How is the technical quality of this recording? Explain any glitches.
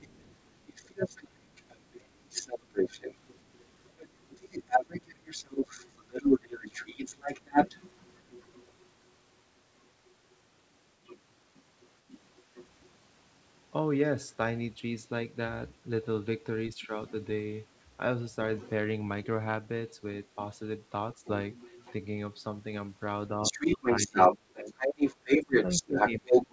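The recording has clear echo and double-talk problems. The speech is band-limited to about 8 kHz throughout, which fits a G.722 wideband call path.

Other side's voice leaking through: A second voice runs under the talker from 0.0 to 12.89 s, only slightly quieter than the main speech. Brief, much fainter scraps follow at 16.82–17.11 s, 18.56–19.26 s and 21.13–21.93 s, each about 20 to 25 dB down. From 23.43 s to the end, the second voice becomes louder than the talker. The likely cause is loudspeaker playback reaching the microphone without the echo canceller fully removing it.

Speech suppressed in double talk: At 16.75–16.92 s the talker's level dips briefly and shallowly, by about 5 dB over roughly a tenth of a second, while the other voice is present. From 23.34 s to the end, the talker is pushed down much harder, by up to about 25 dB, while the leaking voice dominates. This is likely the canceller failing to separate near and far speech during overlap and attenuating both.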